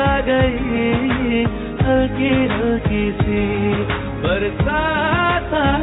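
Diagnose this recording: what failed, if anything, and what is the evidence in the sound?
Nothing in the recording points to a failure at any stage of the chain. No dropout, discontinuity, distortion or other disturbance can be heard at any point.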